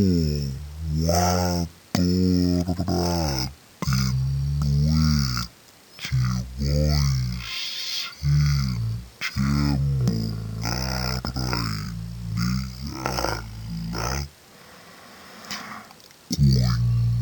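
Stereo read as mono runs through the whole clip. The left and right samples, which alternate in a stereo stream, were read one after another as if they were consecutive samples of one channel. Each moment of sound therefore takes twice as long to play. The speech crawls at half speed and drops a full octave, 12 semitones down, so it sounds slow and heavy. A fainter mirrored copy of the sound also appears in the upper half of the spectrum.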